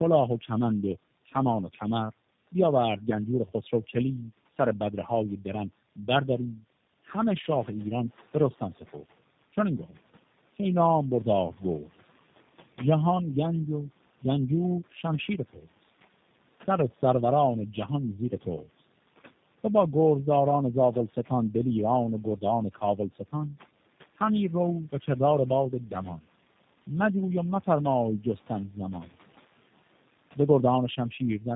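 Throughout, tandem speech coding: the speech passes through G.729A twice with G.711 between, sounding rougher, more muffled and warblier than one codec, with nothing above 3.8 kHz. From 7.42 to 8.99 s, the noise suppressor is catching up: room noise jumps about 10 dB near 7.5 s and first comes through with less reduction, then sinks by about 10 dB as the estimate adapts. That sinking marks it as the suppressor lagging, not simply a louder room.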